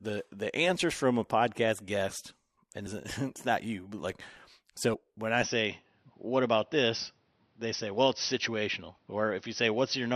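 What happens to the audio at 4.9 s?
At 4.93 s there is damaged data in a compressed stream. The decoder misreads the corrupted frame and loses sync. It resyncs quickly, leaving a brief blip.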